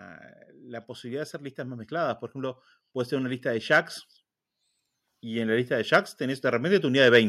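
Speech with automatic gain rising twice, 0.86 to 3.97 s and 5.21 to 7.24 s: the gain control lifts level about 5 dB, swelling voice and background together.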